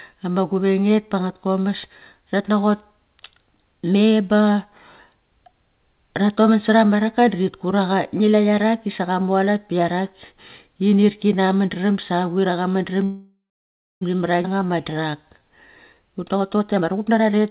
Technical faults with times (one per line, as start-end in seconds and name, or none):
13.04-14.03 call audio freeze
14.43-14.46 skip ahead
14.53-15.49 jitter buffer slow-down
16.14-17.50 jitter buffer speed-up